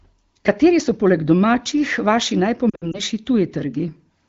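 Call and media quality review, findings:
Lost AMR speech frames, 2.70–3.00 s, just after "so poleg domačih vaši": brief dips and warbling scattered over about 240 ms, longest gap about 60 ms. Suggests roughly six 20 ms frames failing checksum on the radio link; the AMR-WB decoder concealed them by repeating pitch and spectral settings with decaying gain. Surrounding wideband speech is clear, consistent with a higher AMR-WB rate.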